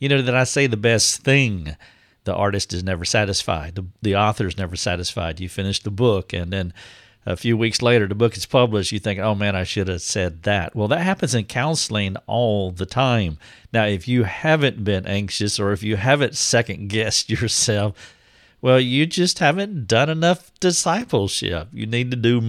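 At 21.01 s the speech drops into a block of digital silence. It lasts about 2.9 ms, which fits a 128-sample buffer left unfilled. The cut to silence and back has no fade. It is heard as a tick or dip.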